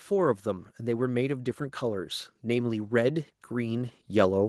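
A speech recording in which automatic gain rising sets in at 0.08 s and continues to the end at 4.49 s. The gain control, judging the input too quiet, keeps turning it up, so voice and background noise swell together. That shared, gradual rise distinguishes it from a speaker simply getting louder.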